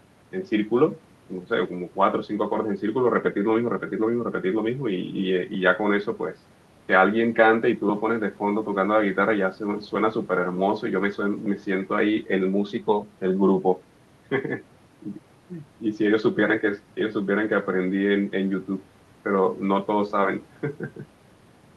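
Nothing technically wrong can be heard in this speech recording. It has gone through a WebRTC call path, and its top end stops at around 12 kHz with the light coding texture that fits Opus at about 32 kbps.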